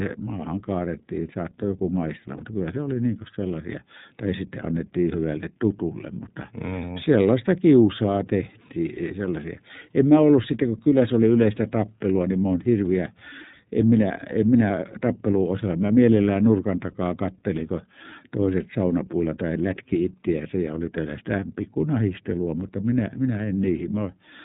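The whole clip runs through the iLBC codec, and the damage is easy to hear. Everything above 4 kHz is gone, and the speech has that slightly rough, synthetic edge from each frame's excitation being coded on its own. The sound fits the 13.33 kbps, 30 ms mode.

At 2.37 s there's a short burst of lost iLBC frames lasting about 30 ms, which fits a single dropped frame. The decoder fills the hole by repeating the last pitch cycle with some noise mixed in, so you get a brief buzzy, held vowel. Because each frame stands alone, the voice snaps back almost immediately.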